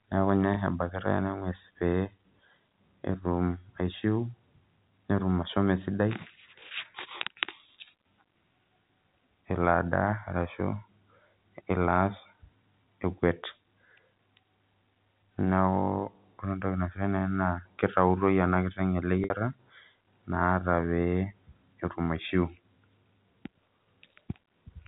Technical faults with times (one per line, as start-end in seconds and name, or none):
0.54-0.56 packet loss with pitch repetition
7.18-7.20 packet loss with pitch repetition
19.24-19.30 packet loss with pitch repetition